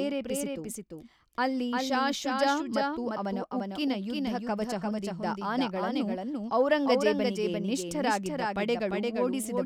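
From start to finish, every syllable is followed by a second, full-band copy arriving about 0.4 seconds later and roughly 5 dB quieter, with no reverberant tail or room colour. This doubled audio track likely comes from the speech being captured again through a slower path and mixed back in.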